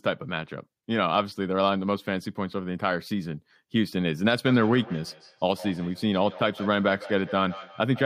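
From 4.45 s to the end of the clip, the speech picks up a feedback echo between two devices. Two devices in the same room are on one call. One plays what the other's microphone sent, and that microphone hears it again. Each echo canceller only removes its own device's playback, so the loop survives. Each word returns roughly every 150 ms as a fainter copy, about 16 dB below the speech at its loudest.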